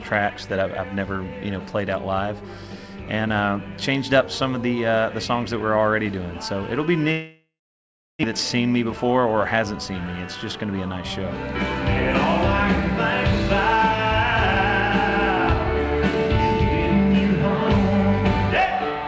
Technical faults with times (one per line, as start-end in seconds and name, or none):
7.12-8.34 long network dropout
8.81-9.33 jitter buffer speed-up